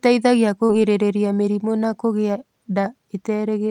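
Short concealed packet loss hits this speech twice: about 40 ms of audio reached the decoder too late at 0.65 s, and 20 ms after "mĩrimũ na kũgĩa" at 2.81 s. Each gap was patched by extending the preceding sound, heard as a brief smear or wobble.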